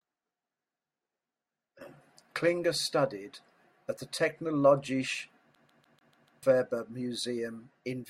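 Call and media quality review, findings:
CD stuck on one turn, 5.55 to 6.43 s. Speech freezes into a fast, even stutter: one 0.15 s chunk plays six times over, with a tiny mute at each jump. Probable component is the CD transport. A scratch kicks the laser back a track every revolution, so it keeps rereading the same spot until it breaks free.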